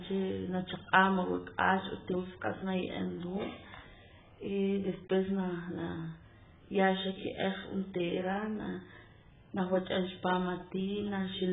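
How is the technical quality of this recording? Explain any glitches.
The recording is heavily degraded for its whole length, with a dull, band-limited sound that points to low-bitrate lossy coding. Throughout, likely AAC compression at a very low rate, around 8 kbps: nothing survives above about 3.8 kHz, and the speech sounds muffled, smeared and warbly.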